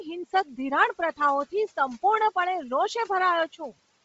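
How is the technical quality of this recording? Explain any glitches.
The recording is degraded from start to finish by heavy codec damage. The speech has a grainy, breathy edge, and nothing is present above 7.7 kHz. The low room noise, about 23 dB below the speech, is part of the recording rather than a fault.

Bluetooth LC3 compression, throughout: the likely cause is the LE Audio codec running at a low rate, which fits roughly 24 kbps with 7.5 ms frames. Short of bits, it discards much of the upper spectrum and fills the gaps with synthetic noise. The result is a hissy, granular texture on the speech and a hard ceiling at 7.7 kHz. A plain low-pass filter would also remove the top but would leave clean, dull speech. The noisy grain comes from the codec.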